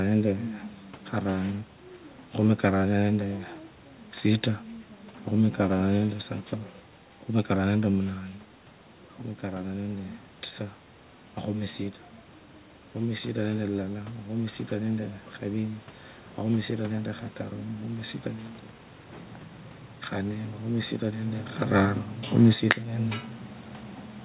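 Automatic gain falling from 22.37 s to the end of the clip: the gain control judged the input too loud or its background noise too strong and pulled its gain down, so the speech sinks in level along with the room noise behind it, while the band stays capped at 4 kHz from the call path.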